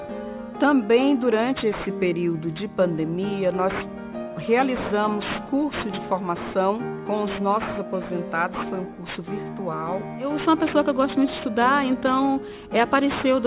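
Aliasing runs through the whole clip. The rate drop fits 44.1 kHz down to 8 kHz, with no filter first. Everything above 4 kHz folds back below it. The false tones sit roughly 15 dB under the signal. High sounds turn gritty and metallic.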